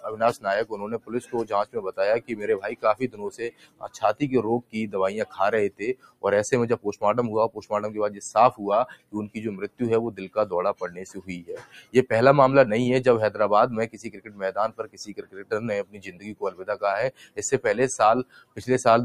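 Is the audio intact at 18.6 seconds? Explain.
No. From 18.24 to 18.62 s, sound is cut by the noise suppressor: it mistook this stretch for noise and pulled it down by about 16 dB for roughly 0.4 s. The waveform envelope shows a sudden hollow there, and the spectrogram thins out and darkens.

Underneath, a noise suppressor applied to music or sounds is active throughout. It treats steady content as noise, so levels swing by around 20 dB, seen as an uneven envelope.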